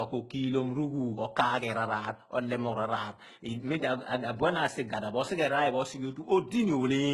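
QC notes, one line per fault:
Throughout: transcoding between lossy codecs. The speech carries two layers of coding damage at once: a smeared, swirly high band typical of low-rate spectral band replication, with a second codec's grainy, warbling texture on top. The sound likely went through HE-AAC at a rate near 12 kbit/s and then Opus near 32 kbit/s. On a spectrogram, the top band appears patchy and copied, with nothing above 19.6 kHz.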